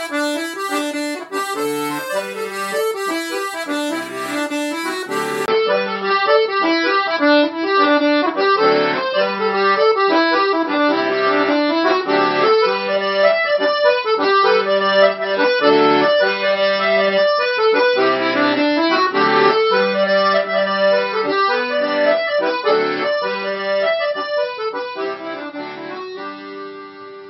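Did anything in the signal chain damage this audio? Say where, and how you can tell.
Yes: after a 20 ms gap at 5.46 s, nothing above 5.6 kHz survives and new background noise appears, likely the input switched to a poorer device.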